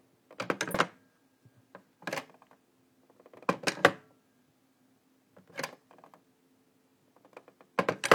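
Compressed frames skipped at about 0.70 to 0.75 s in this recording of sounds. The audio jumps ahead by around 150 ms, consistent with roughly three frames of 46.4 ms going missing or being rejected by the decoder.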